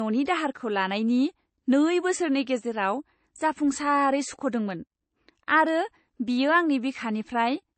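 Transcoding between lossy codecs runs throughout: nothing above 8.3 kHz, with two layers of smeared, swirly artefacts, likely a low-rate MP3 re-encoded as AAC.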